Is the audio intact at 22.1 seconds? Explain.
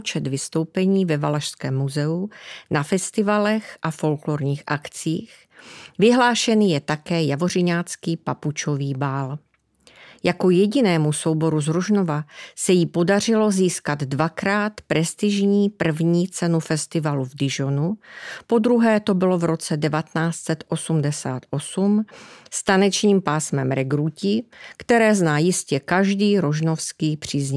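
Yes, at 22.1 seconds the speech plays through intact, with no dropout, distortion or other fault audible at that point.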